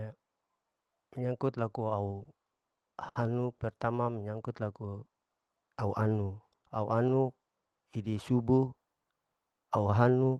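Between 2.23 and 3.27 s, packets reached the receiver late or more slowly than they were played out, so the jitter buffer ran dry four times in about a second. This is repeated stalls, a stutter. Each time, the receiver extended the last sound to cover the gap, about 130 ms in all, with the longest single fill near 70 ms. Nothing is actually lost, but roughly a seventh of that stretch is held-over sound, so the speech drags and hiccups unevenly.

Shortly after, from 3.58 to 3.62 s, there is a short stall from a late packet. A single packet was not ready when it was due, and the buffer emptied again as the delay shifted by about 20 ms. The receiver stretched the preceding sound by about 20 ms until the packet arrived, then resumed from the same point. The result is a brief held moment with a faint buzz or dip, heard through a call codec whose band stops around 12 kHz.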